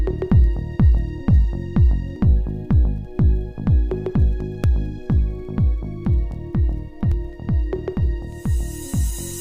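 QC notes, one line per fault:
2.16 s, 4.64 s, 7.12 s: audio missing between chunks, about 20 ms skipped every 2.5 s, likely at chunk boundaries; the waveform shows abrupt joins and the spectrogram shows hard vertical seams.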